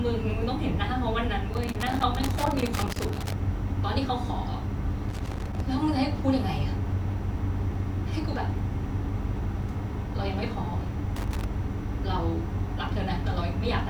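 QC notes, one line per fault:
1.5 to 3.3 s, 5.1 to 5.6 s and 11.2 to 11.4 s: loose connector crackle. The speech breaks into irregular bursts of scratching and crackle. The first burst lasts nearly two seconds. The other two are brief, about half a second and under a third of a second. A worn or dirty contact is making and breaking as it shifts. That chops the signal on and off in rapid, uneven steps. Any DC on the line turns each break into a pop.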